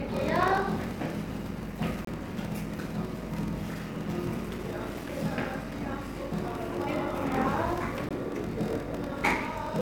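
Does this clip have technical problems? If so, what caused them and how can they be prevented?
Yes. A block size mismatch (padded) runs throughout. Short blocks are zero-filled to a longer read size. This causes a 41.7 Hz buzz, and the audio plays at 0.889 times normal speed with timbre unchanged. That fits 1024-sample blocks read as about 1152. Prevent it by matching block sizes between stages.

There are two gaps between stream segments. A 26 ms silence falls at 2.05 to 2.07 s, and a 17 ms silence falls at 8.09 s. These are hard-edged holes where segment timestamps fail to line up. Prevent them by making each segment start exactly where the previous one ends.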